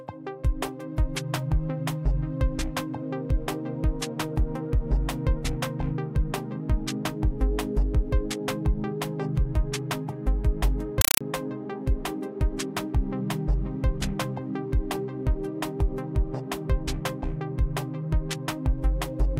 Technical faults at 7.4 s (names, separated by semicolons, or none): none